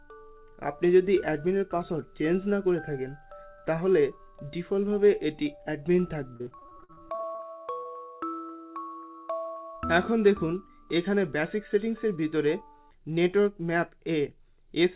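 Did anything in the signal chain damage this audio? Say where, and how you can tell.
Yes, at the network stage. From 6.36 to 7.41 s there is repeated packet loss with a robotic sound: over a dozen dropouts, the longest about 50 ms, with roughly a third of that stretch patched. The receiver repeated the last sound into each hole, so the result is choppy, with pieces missing. On a spectrogram, within the band that stops at 4 kHz, this shows as smeared, frozen harmonic slices. On the waveform, periodic stretches repeat the preceding cycle.

A single short concealed packet loss follows from 7.83 to 7.87 s: about 20 ms never arrived in time and was filled by extending the preceding sound, then blended back in. It is heard as a brief smear or wobble. The waveform shows one copied fragment, and the spectrogram shows a momentary blur with no fresh onsets.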